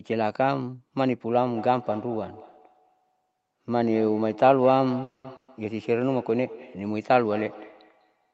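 From 1.35 s to the end, a second device in the same room is on the call and playing back what this microphone sends. The microphone picks that playback up again, and the local echo canceller cannot remove sound it did not play itself. This is feedback echo between two devices: each stretch of speech returns roughly a fifth of a second later, peaking about 16 dB below the speech, thinner and more ringing than the original. It keeps coming round for the rest of the clip.

At 5.03 s the incoming packets stall, likely because they were held up in transit and the jitter buffer ran dry. This is a call audio freeze. For 210 ms the receiver extends the last sound as a decaying buzz or hiss, with the final 60 ms dropping to silence. The speech then resumes exactly where it stopped, so nothing is lost, but everything after this point is delayed by 210 ms.

At 5.36 s a burst of packet loss follows. 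About 120 ms of audio never arrives in time. The receiver covers the gap by stretching and fading the preceding sound, going silent for the last 60 ms, then jumps ahead. The 120 ms of speech in between is simply missing, leaving a skip in the speech after 5.50 s. Throughout, the Opus call path limits the audio to 8 kHz, which is expected for the codec.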